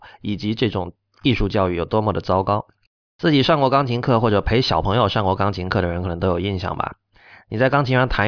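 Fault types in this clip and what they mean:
No faults detected in the speech; nothing to list.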